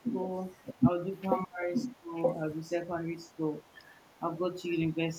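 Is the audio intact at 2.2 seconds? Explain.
No. From 1.76 to 2.33 s there is an echo leak: a delayed copy of the voice, trailing it by about 0.92 s and only about 5 dB below it, likely from a speakerphone whose echo canceller let its microphone pickup return down the line. It adds sound rather than removing it.

That separates it from the speech suppressed in double talk that runs from 0.81 to 2.14 s, ending just before this moment. There the talker's own voice is pulled down, by as much as about 20 dB, over roughly a second in total while both sides overlap.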